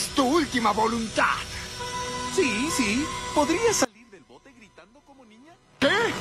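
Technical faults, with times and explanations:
3.85 to 5.82 s, one channel inverted: the sound drops by about 26 dB, with the centre scooped out. Likely one side's polarity got flipped, so shared content cancels when the channels sum to mono, leaving just their faint difference.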